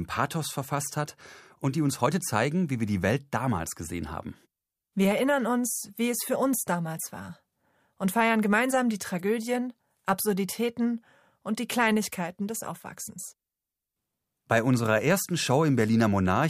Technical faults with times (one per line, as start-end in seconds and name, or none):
none